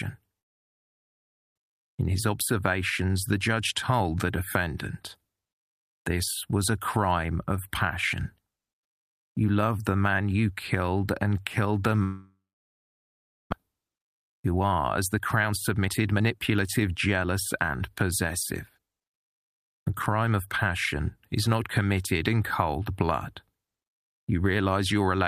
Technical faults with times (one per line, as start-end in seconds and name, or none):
0.39-1.60 long network dropout
1.68-4.15 jitter buffer speed-up
12.03-13.54 long network dropout
14.09-14.61 jitter buffer speed-up
15.17-18.25 jitter buffer speed-up